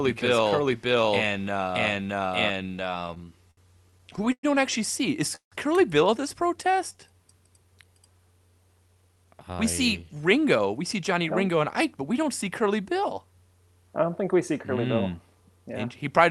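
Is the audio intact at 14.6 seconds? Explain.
Yes, the speech at 14.6 seconds is intact, with no dropout, glitch or other fault at that moment.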